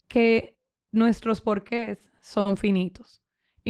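Repeated stalls (stutter) run from 1.67 to 2.47 s. Across that stretch the packets came in late or slower than playback consumed them, so the jitter buffer emptied five times. At each gap the receiver stretched the last bit of sound to bridge it, filling about 120 ms in total, with the longest gap 50 ms. Nothing is lost, yet roughly 15% of that span is concealment, making the speech drag and hiccup.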